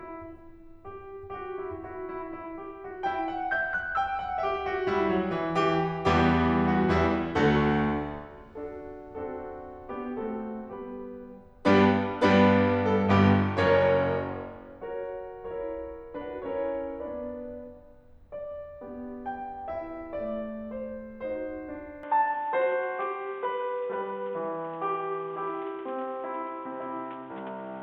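At 22.03 s the music abruptly turns dull and boxy and stays that way to the end, most likely because the input switched to a poorer device partway through the recording. From that point nothing is heard above about 3.8 kHz, the overall level shifts by roughly 5 dB, and a new noise floor appears about 30 dB below the music. The change happens with no silence at the switch, so the loss of top end is instant.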